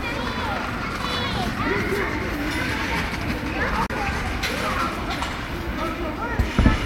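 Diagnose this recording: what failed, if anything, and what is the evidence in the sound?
The sound drops out for 29 ms at 3.86 s, then resumes mid-stream: likely a playback-stage Bluetooth dropout, which fits two lost packets.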